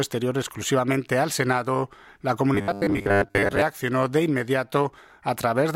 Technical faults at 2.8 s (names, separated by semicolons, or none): robotic sound from repeated short buffers